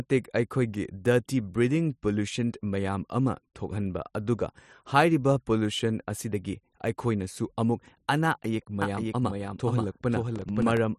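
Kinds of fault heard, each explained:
doubled audio track: likely a second, slower capture path mixing in a copy about half a second behind, roughly 5 dB quieter, starting abruptly near 8.8 s.
processor overload crackle: the processor misses about seven tiny buffer deadlines, each leaving a brief silent gap, producing a gritty crackle from 10.36 to 10.77 s.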